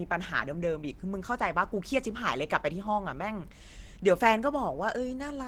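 Throughout, the speech sounds muffled, hoarse and grainy, though it extends to about 20.2 kHz. This is likely Opus compression in its hybrid speech mode, fitting roughly 16 kbps.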